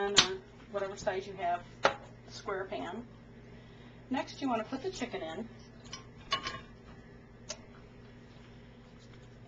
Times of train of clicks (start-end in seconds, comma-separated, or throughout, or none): none